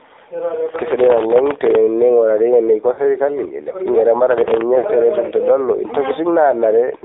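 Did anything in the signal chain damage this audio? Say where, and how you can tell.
Yes. AMR narrowband mobile codec, throughout, at the codec stage: the speech is confined to roughly 300 Hz to 3.7 kHz, with a buzzy, synthetic edge. That fits a low-rate mode around 7.4 kbps, where a few pulses per subframe drive a vocal-tract model.

Processor overload crackle, at 0.69 to 1.75 s and again at 4.31 to 4.61 s, at the driver or buffer stage: a gritty tearing rides on the speech. Very short buffers, under a millisecond each, missed their deadlines about 50 times in the first stretch and about 15 in the second. Each miss replayed stale audio with hard edges.

Lost AMR speech frames, at 2.92 to 3.03 s and 4.78 to 4.86 s, from network errors: the speech briefly smears and dips for about 60 ms each time, which fits three 20 ms frames. The decoder repeated its last pitch and filter settings with falling gain before recovering.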